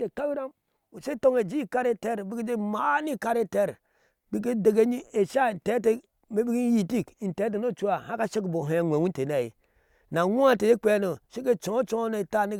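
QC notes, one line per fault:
No technical faults can be heard anywhere in the speech signal.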